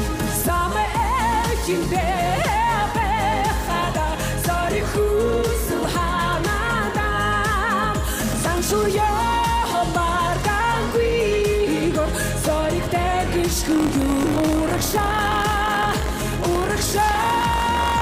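From 13.61 s to the end, the writer and the hardware reader of the audio ring buffer have slipped out of step and cross inside every period, which is buffer tearing. A small slice of each buffer replays audio from about a tenth of a second earlier, joined hard on both sides. The result is a steady robotic rattle at 46.9 Hz, which fits a 1024-sample buffer, heard whenever there is signal.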